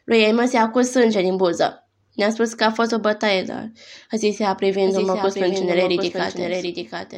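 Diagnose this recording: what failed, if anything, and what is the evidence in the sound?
From 4.85 s, just after "dar a zis ea", a second full-band copy of the speech runs roughly 0.7 s behind, about 5 dB quieter and without any room decay, and continues to the end. This doubled audio track is likely from a second, slower capture path at the driver or buffer stage.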